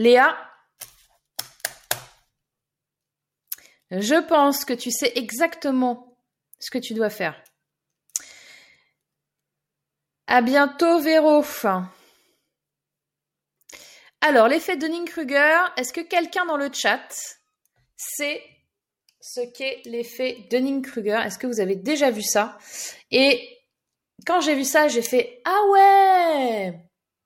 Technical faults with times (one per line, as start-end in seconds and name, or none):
none